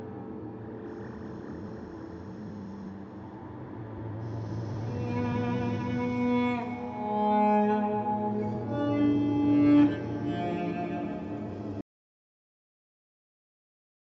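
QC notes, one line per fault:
11.81 s to end, audio dropout to silence: the sound cuts off abruptly at 11.81 s and never returns, leaving about 2.3 s of silence with no room tone or noise floor, unlike the band-limited call-microphone sound before it, which stops at 8 kHz. The likely cause is that the input was lost, through a disconnected device, a failed link or a mute, while recording went on writing silence, so whatever followed is missing.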